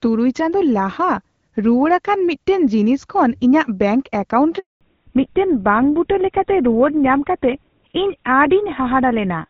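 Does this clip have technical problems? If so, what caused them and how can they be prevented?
Yes. From 4.59 s to 4.81 s the speech cuts out for 220 ms, fading within a few tens of milliseconds into silence before resuming. This is a handover gap: while the call switched networks no speech frames arrived, so that stretch is simply missing. It can be prevented by making the handover seamless, so the new link is set up and carrying speech before the old one is released.

From 4.81 s to the end the voice turns duller and rougher, losing everything above 4 kHz. This is a fallback to narrowband. The call dropped out of HD Voice, where the earlier part had the light coding texture expected at around 12.65 kbit/s, and the sound fits a switch to a GSM full-rate codec. It can be prevented by ensuring the target network supports wideband codecs so HD Voice survives the handover.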